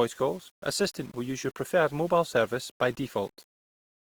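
From start to finish the speech carries grainy distortion that rises and falls with the sound. This is low bit depth without dither, likely a rounding to very few levels with no noise added to decorrelate the error. The error sits roughly 30 dB below the signal, which fits about 7 bits. Quiet stretches turn gritty. A zoomed waveform shows visible staircase steps, and a spectrogram shows broadband hash that appears only while the sound is present.

Also throughout, the speech has plainly audible Opus compression, likely from encoding in the CELT music mode at a rate that fits about 24 kbps. When bits run short, the encoder fills bands with folded or noise-like content, so tones turn rough, noisy and granular rather than swirly. The bandwidth stays fullband, with nothing above about 20.2 kHz. A spectrogram shows smeared, speckled harmonics and noisy fill in place of clean partials, with a flat ceiling near 20.2 kHz.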